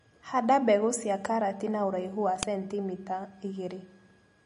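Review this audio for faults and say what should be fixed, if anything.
MP3 compression, throughout: the speech has a hard treble ceiling with nothing above 10.6 kHz, plus plainly audible watery, swirly texture and smeared consonant attacks. This likely comes from an encoder short of bits, which fits a low bitrate near 40 kbps, dropping weak frequency lines frame to frame. Prevent it by encoding at a higher bitrate or keeping a lossless copy.

Uninitialised buffer at 2.43 s: a very brief, loud crack, about 1.33 ms long, which fits a 64-sample block being played before any audio was written to it, so leftover memory came out as samples. Prevent it by zero-filling buffers and only queuing them once they hold valid audio.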